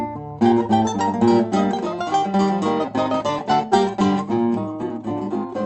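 Skip ahead at 2.84 s: about half a second of the music is simply missing, discarded while later audio was already queued. Playback leaps forward with no gap, and the material on either side is joined almost directly, so the passage lurches abruptly.

Jitter buffer speed-up from 2.93 s to 5.63 s: with excess audio still held, the receiver trims many tiny pitch-period-length pieces in succession, roughly a fifth of a second in total. The music runs about 8% fast at unchanged pitch, its steady tempo audibly pushed.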